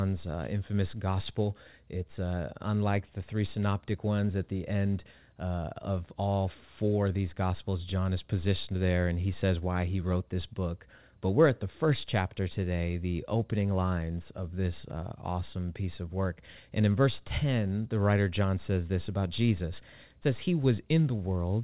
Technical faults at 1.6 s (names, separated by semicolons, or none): none